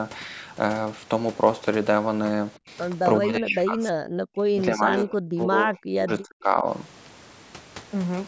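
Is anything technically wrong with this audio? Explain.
Yes. From 3.19 to 3.84 s and again from 4.09 to 6.66 s the speech is pulled down hard, by about 30 dB and then about 40 dB at its deepest, with some 2.7 seconds affected in all. This is speech suppressed in double talk, likely caused by an echo canceller that heard a far-end talker over this one and attenuated both. The dips follow the other side's activity rather than a steady level change, which separates them from plain gain riding or a dropout. The band stops at 8 kHz, as expected from the call microphone processing.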